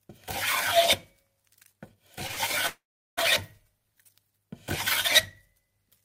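A clip of everyday sound with two back-to-back short stalls from a late packet, one at 2.27 to 2.31 s and one right after at 2.31 to 2.39 s. Each time the jitter buffer runs dry, and the receiver holds the last bit of sound for about 19 ms and then 55 ms until the next packet turns up. Nothing gets lost. The audio just picks up where it left off, so that moment sounds a touch drawn out with a slight buzz or dip, and everything after it lands about 74 ms later than it should. A bigger hitch follows at 2.67 to 3.19 s, which is a call audio freeze. The sound carries on as a fading buzz or hiss for a moment and then drops to silence for roughly 380 ms, about half a second of inserted gap in total. It likely comes from packets being held up in transit long enough to empty the buffer. When playback resumes it continues from the same spot, so again nothing is missing, it's just pushed later.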